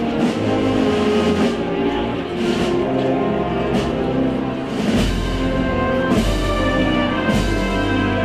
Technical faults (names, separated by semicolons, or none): none